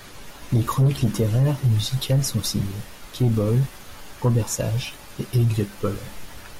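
No dropouts, clicks, distortion or level jumps occur anywhere in the speech, and nothing in the signal chain calls for attention.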